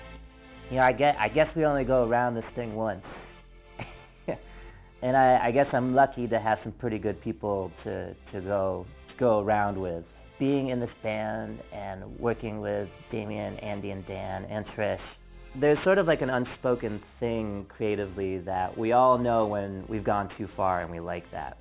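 From start to finish the sound has a gritty, metallic edge, with aliasing folding energy back under 4 kHz, which points to downsampling to 8 kHz without an anti-aliasing filter.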